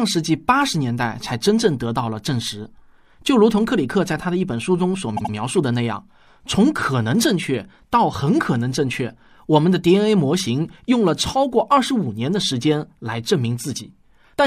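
At 5.16 s the speech stutters. This is a repeated-frames fault. A block of about 78 ms, consistent with a few compressed frames, plays twice more through 5.32 s. The same sliver of sound sounds three times, and the clip runs about 157 ms longer.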